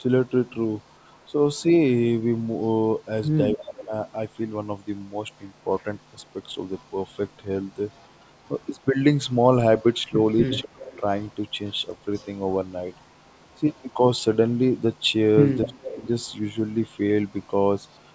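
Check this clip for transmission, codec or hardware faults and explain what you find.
The clip has two linked faults from the call path: an echo leak and speech suppressed in double talk.

Echo leak, 0.47 to 1.65 s and from 3.24 s to the end: a faint copy of the speech returns 255 ms later, about 35 dB and then about 30 dB below it. The likely cause is a far-end loudspeaker echo that the canceller missed. It is a separate, clearly delayed copy rather than the smooth tail of reverb.

Speech suppressed in double talk, at 1.27 to 1.33, 3.54 to 3.92, 10.16 to 10.83 and 15.64 to 16.05 s: the speech drops by roughly 10, 25, 30 and 20 dB. The likely cause is the canceller turning down both talkers while they overlap. Unlike packet dropouts, these are level dips that line up with the other side speaking.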